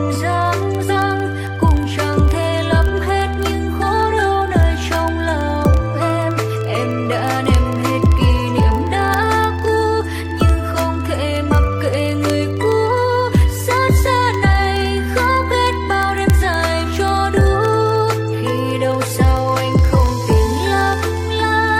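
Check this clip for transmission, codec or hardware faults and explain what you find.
One fault runs through almost the whole clip: word clock ticks, from 0.12 s to 21.77 s. They are sharp clicks of uneven strength, arriving steadily about every 30 ms, so hundreds of them sit under the sound as a fast, gritty pulse. They come from a digital link read by a device on its own clock. Its rate is off by several hundred parts per million, so the clocks slip constantly, each slip misreading samples and dropping or repeating one.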